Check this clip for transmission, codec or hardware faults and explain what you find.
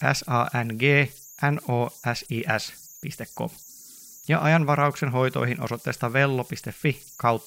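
One hardware fault runs through the whole speech clip: converter idle tones. An undithered delta-sigma converter locks into repeating bit patterns on small input, leaving a faint whistle around 7 kHz, about 25 dB below the signal, audible in pauses.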